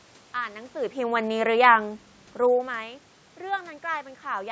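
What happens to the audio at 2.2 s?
Nothing goes wrong at 2.2 s; the audio is intact there, with no dropout, glitch or distortion at that moment.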